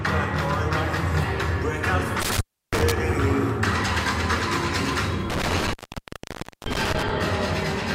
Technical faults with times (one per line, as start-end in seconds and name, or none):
2.22-2.92 intermittent contact
5.30-7.09 intermittent contact